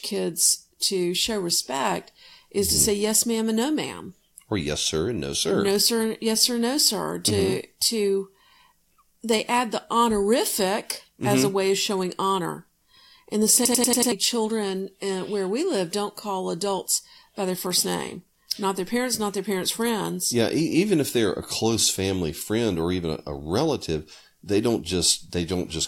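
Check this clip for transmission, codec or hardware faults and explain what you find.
One hardware fault is present. At 13.65 to 14.12 s, after "in the", a machine-gun stutter repeats a 93 ms fragment five times at 10.8 Hz: a system hang loop replaying a frozen buffer, consistent with 4096 samples, losing about half a second before "children uh where we".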